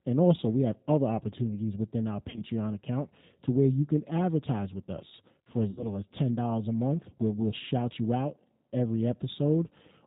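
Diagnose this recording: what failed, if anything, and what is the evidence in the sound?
The whole clip carries the G.729 codec at 8 kbit/s, a codec-stage fault. Nothing above 4 kHz survives, and the speech sounds plainly rough and synthetic. A simple low-pass would only dull the sound. Here the roughness comes from rebuilding each frame from a vocal-tract filter, a pitch predictor and sparse pulses.

VoIP packet loss concealed by the speech codec, a network-stage fault, appears at 2.30 to 2.43 s, between "other opportunities within our" and "account to where you", and at 5.71 to 5.88 s, after "advertise with us for". The decoder stretches its last pitch and filter into a buzzy tone or coloured noise that fades, which points to about 40 ms and 60 ms lost. The speech stays weak briefly after each, where a plain dropout would give silence or a click.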